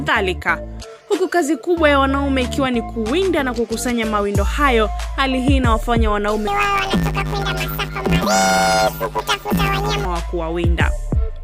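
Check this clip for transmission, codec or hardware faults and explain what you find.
One fault is present. Planar audio read as interleaved, from 6.47 to 10.06 s: each 10 ms block stores all left samples then all right, but is read as alternating pairs, so every block plays twice at double speed. With blocks this short, the sound becomes a robotic buzz at 100 Hz, without a clear octave shift.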